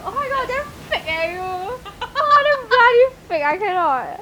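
No technical faults can be heard in this recording.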